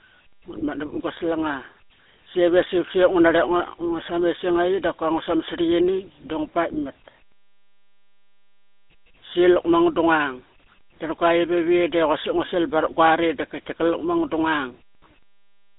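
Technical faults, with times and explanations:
Throughout, GSM full-rate codec: the speech was squeezed to about 13 kbps by a vocal-tract model fed with regularly spaced pulses, leaving a buzzy, gravelly roughness. Nothing survives above 3.8 kHz, and the line band of roughly 250 Hz to 3.6 kHz sounds thin and boxy.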